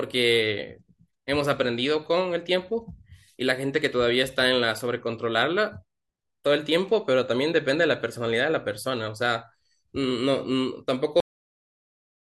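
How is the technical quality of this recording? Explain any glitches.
The recording has one clear glitch: a cut-off end. At 11.20 s the speech stops abruptly mid-sound and drops straight to digital silence for the final 1.2 s. The last buffers were never written or played back, so the sound has no natural decay or tail.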